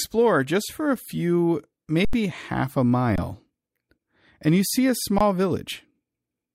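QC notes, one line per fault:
2.05–2.13 s, underrun with held sample: the output ran dry for about 85 ms and the converter simply held its last value, so the speech goes flat instead of dropping to zero. Roughly a tenth of a second of live audio went missing. The length fits a 4096-sample buffer.
3.16–3.18 s and 5.18–5.21 s, underrun with held sample: the same fault but shorter, about 21 ms each, consistent with a 1024-sample buffer. Around 20 ms was lost each time.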